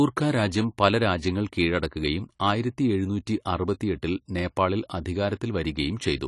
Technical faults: AAC compression

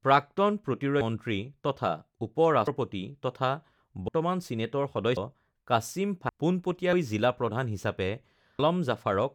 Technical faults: compressed frames skipped

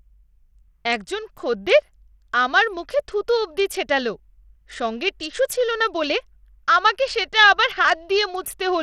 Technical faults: Bluetooth SBC compression

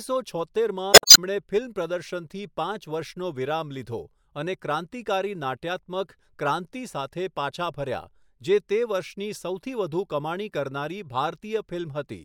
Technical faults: damaged data in a compressed stream

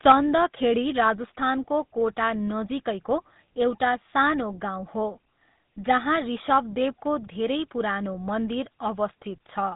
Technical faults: GSM full-rate codec; microphone overload; microphone volume stepped down

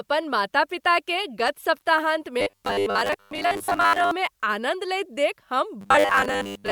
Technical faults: loose connector crackle; robotic sound from repeated short buffers

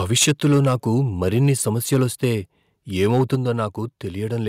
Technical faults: microphone overload; microphone volume stepped down

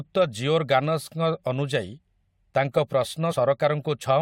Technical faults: damaged data in a compressed stream

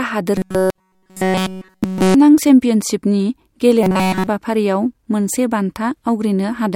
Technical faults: robotic sound from repeated short buffers

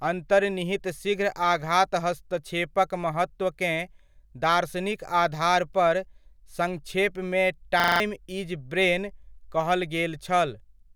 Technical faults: system hang loop

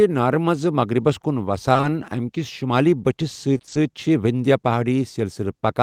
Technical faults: short concealed packet loss; repeated packet loss (robotic sound)

